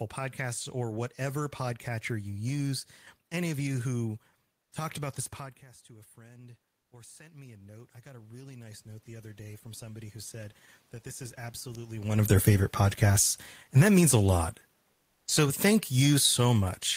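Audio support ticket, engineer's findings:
Automatic gain rising, 6.14 to 12.38 s. AGC responding to input drop of about 19 dB after talker moves back near 5.5 s; gain ramps up about 13 dB over roughly six seconds. Voice and room noise swell together, steadily, not stepwise. Talker moves again near 12.0 s, around when ramp ends.

Comfort noise in place of the background, 14.93 to 15.27 s, 340 ms. Sender likely in Opus DTX during pause; receiver synthesises noise instead of real room noise, which sits about 49 dB below loud passages. Gap filled with smoother, featureless noise about 4 dB quieter, room detail gone until sound resumes.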